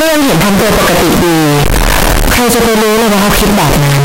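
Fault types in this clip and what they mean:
Signed and unsigned mixed up, throughout: the speech comes with a harsh, very loud roar, quiet gaps as loud as speech, likely from 16-bit samples with signed and unsigned swapped, flipping the top bit so each zero crossing jumps across the range.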